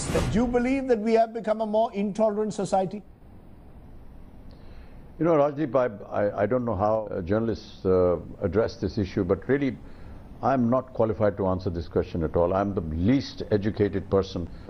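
Nothing here sounds wrong, so there's no technical problem to point to anywhere in this audio.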